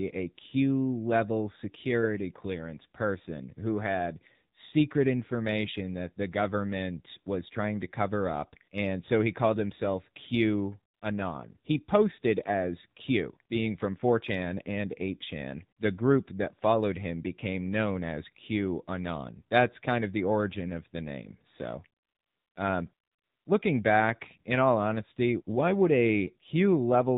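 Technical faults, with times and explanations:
Throughout: AMR narrowband mobile codec. The speech is squeezed into the 8 kHz-sampled narrowband mobile format, so nothing above 4 kHz survives and consonants lose their bite. At a rate consistent with the 7.4 kbps mode, the vocal-tract model is fed by only a handful of excitation pulses per 5 ms subframe, which gives the voice a buzzy, synthetic edge. The coding damage is plainly audible across the whole clip.
10.94–11.02 s, 22.02–22.56 s and 22.94–23.46 s: AMR comfort noise. In each gap the phone decided nobody was talking and stopped sending speech frames, for about 80 ms, 540 ms and 520 ms respectively. The receiving end filled those stretches with generated noise built from a rough estimate of the background's level and spectrum. The result is a smooth, even hiss that cuts in and out, replacing the real ambience rather than continuing it.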